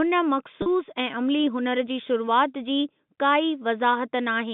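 Speech down a telephone-band line, with a short packet loss with pitch repetition at about 0.62 to 0.66 s. Roughly 40 ms went missing, which fits two 20 ms packets, and the receiver filled the hole by looping the last pitch period, so you hear a brief held, slightly buzzy smear before the speech picks up again.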